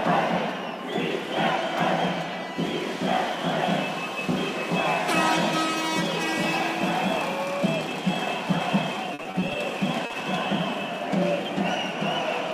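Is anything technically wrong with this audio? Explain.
Yes, there are two network-related faults.

From 9.14 to 9.56 s there is repeated packet loss, giving a robotic sound. Six closely spaced gaps were each patched by extending the preceding audio. About a third of the stretch is concealment, totalling 140 ms, and about 80 ms of sound is lost outright, with the longest gap about 50 ms. The result is choppy, with pieces missing.

From 10.06 to 10.12 s there is a short stall from a late packet. The jitter buffer ran dry when the packet missed its slot, so the receiver held the last sound for about 40 ms, then resumed where it left off. Nothing is missing, but the sound lingers briefly with a faint buzz or dip, and the playout delay shifts by about 40 ms.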